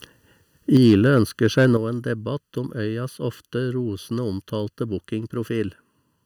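Channel delay (comb filtering) runs throughout: one channel lags by a bit under a millisecond, and summing to mono carves evenly spaced notches from around 700 Hz, leaving the speech hollow and phasey.

Microphone overload occurs from 0.74 to 1.18 s and again from 1.58 to 1.65 s, just before "nå en debatt". Peaks exceed full scale by about 1 dB, likely from excessive input gain, giving loud syllables a harsh, crackly edge.

A microphone volume step-down follows at 0.77 s, about 4 dB, and at 1.77 s, about 8 dB, just before "nå en debatt". Level drops abruptly, likely because the call software cut input gain after clipping.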